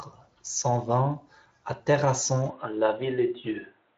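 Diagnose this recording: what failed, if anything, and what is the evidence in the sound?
From 2.5 s the speech abruptly loses everything above 3.8 kHz, with no gap or level jump. The likely cause is the input switching to a poorer device at the driver level.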